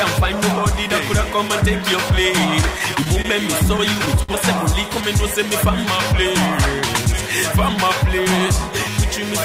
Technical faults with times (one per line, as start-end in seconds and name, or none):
2.61-3.26 repeated stalls (stutter)
3.64-4.30 repeated stalls (stutter)